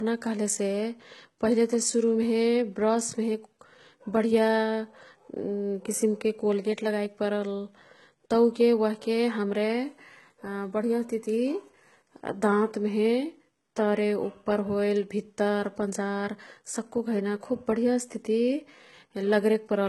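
From start to finish, the speech stops dead above about 11.8 kHz, with nothing at all in the top octave. The sound carries the artefacts of a very low-bitrate encoder, and it stays that way throughout. Yet the file itself is a high-bitrate MP3. This is likely low-bitrate audio saved at a high bitrate. The first pass, consistent with HE-AAC near 16 kbit/s, stripped the detail. Re-encoding near 256 kbit/s preserved that damage faithfully.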